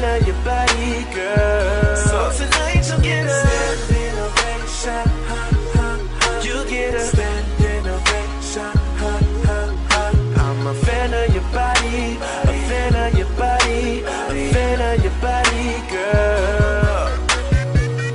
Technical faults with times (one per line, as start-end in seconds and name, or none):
none